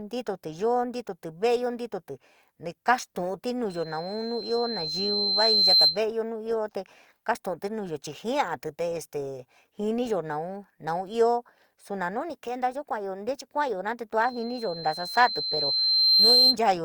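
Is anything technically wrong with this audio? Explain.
Yes. A piercing 4.1 kHz tone swells over about two seconds into a squeal roughly 10 dB above the speech, from 3.69 to 6.02 s and again from 14.21 to 16.57 s. This is loudspeaker feedback squeal: the microphone hears its own loudspeaker, and at 4.1 kHz the loop's gain exceeds one, so that tone keeps reinforcing itself.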